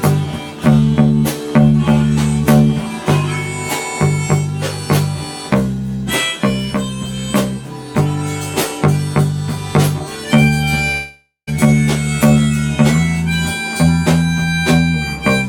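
From 10.91 to 11.49 s the audio fades into a buzz or hiss, then silence, and resumes with a gap. This is likely a long network dropout, far longer than a brief packet glitch.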